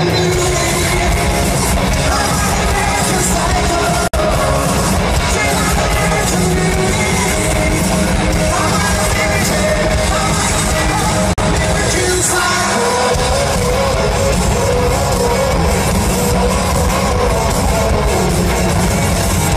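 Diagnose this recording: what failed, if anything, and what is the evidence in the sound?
The failure is at the codec stage: the audio was encoded in separate pieces and joined without trimming, so each join leaves a gap at a join of encoded pieces. Each piece keeps its encoder's leading delay and its padded final frame. Continuous sound drops out for about 58 ms from 4.08 to 4.14 s, and for about 47 ms from 11.33 to 11.38 s. Both silences have smeared edges, and the sound resumes exactly where it broke off.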